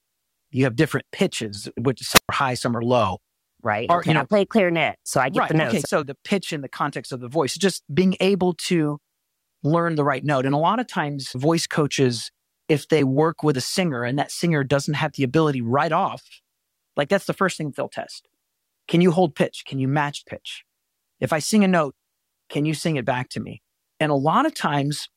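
Speech with a wireless microphone squelch dropout from 2.11 to 2.29 s. The radio link from the transmitter weakens. Hiss rises briefly as the FM signal fades. The receiver's squelch then cuts the output, leaving a hole of near silence of about 116 ms. When the signal recovers, the squelch opens again and the speech resumes at "are high some are". The gap is short.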